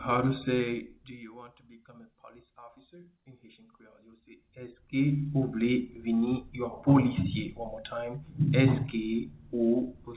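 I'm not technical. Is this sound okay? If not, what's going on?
Yes, nothing here is wrong with the sound.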